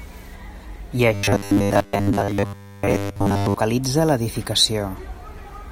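Robotic sound from repeated short buffers runs from 1.14 to 3.56 s, turning the speech into a rigid metallic buzz at 100 Hz that still loosely tracks the words. The likely cause is audio arriving too seldom, so a 10 ms slice is looped for most of that stretch while real audio is skipped.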